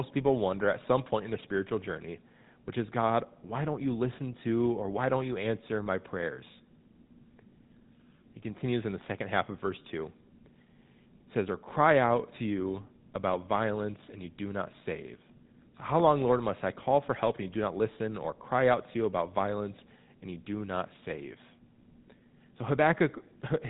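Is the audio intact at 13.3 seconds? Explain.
No, not really. At 13.3 seconds you're hearing the same GSM full-rate codec damage that runs through the whole speech clip. That codec models the vocal tract as a filter and drives it with a coarse pulse train, keeping only every third excitation sample, which fits a 13 kbps budget. The result is a buzzy, gravelly roughness on the voice, and nothing gets through above about 3.8 kHz, so it sounds dull and boxed in.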